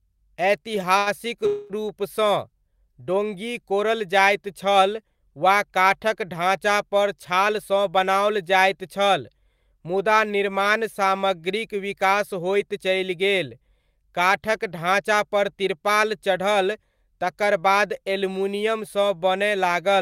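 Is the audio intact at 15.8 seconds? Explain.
No, the speech runs hurried at unchanged pitch there, about 6% fast from 15.01 to 15.89 s. This is a jitter buffer speed-up: the receiver trimmed pitch-period slices, roughly 50 ms in all, to shed excess buffered delay.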